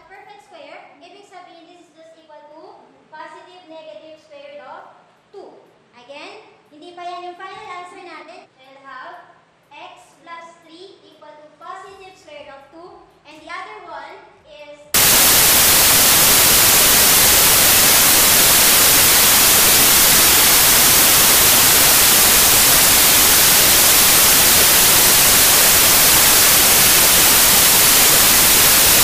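From 14.94 s to the end, samples built from the wrong bytes take over: misassembled bytes make the fast-changing low bits dominate, turning everything into loud broadband noise.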